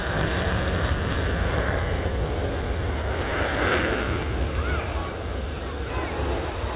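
No technical faults can be heard anywhere in the recording.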